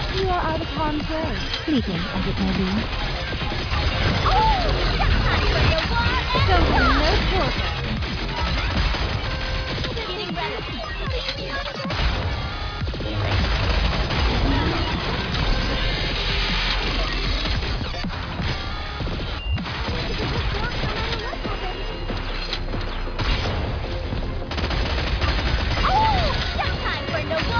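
Nothing in this audio stands out as a technical problem, so there's no fault to point to at any moment.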